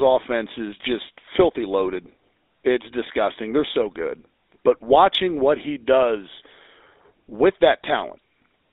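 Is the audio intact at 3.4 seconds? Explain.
No. At 3.4 seconds the speech carries GSM full-rate codec damage, present throughout: the pulse-driven vocal-tract model gives buzzy, gravelly roughness, with a 300 Hz to 3.7 kHz line band.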